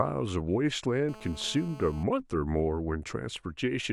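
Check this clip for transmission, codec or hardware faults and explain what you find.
GSM phone buzz is present in this speech clip, from 1.09 s to 2.03 s. A 2G handset close to the recording chain was on a call and transmitting in bursts about 217 times per second. The audio circuitry rectified those radio pulses into a hard, raspy buzz at 217 Hz, rich in harmonics and unrelated to the speech. It sits about 20 dB below the signal and holds nearly steady.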